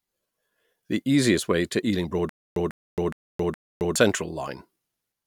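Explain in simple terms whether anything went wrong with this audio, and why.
Playback likely stalled from 2.29 to 3.96 s, causing a stutter with silent gaps: one 0.15-second snippet repeats four times, with 0.27-second silences between.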